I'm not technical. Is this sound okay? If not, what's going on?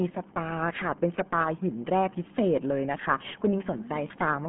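No, the speech has been through the RealAudio 14.4 codec, an old dial-up format that crams sound into very little data. From start to finish nothing above about 3.7 kHz survives, so it sounds muffled and phone-like, with a heavy gargly, bubbling smear.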